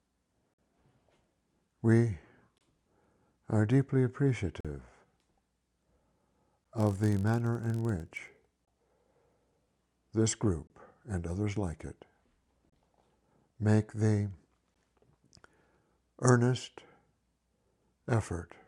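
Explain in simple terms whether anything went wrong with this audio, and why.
Two things went wrong. The first is a gap between stream segments. The audio arrives in pieces about 2 seconds long, and they don't join up cleanly. Short silent holes of 10 to 50 ms appear at 0.54, 2.58, 4.61, 6.64, 8.65, 10.67, 12.70 and 14.74 s.

The second is a filter restarted on every block, from 6.78 to 10.0 s. The filter forgets its state and starts each chunk from silence. This produces a low buzz near 47 Hz, which fits 1024-sample blocks.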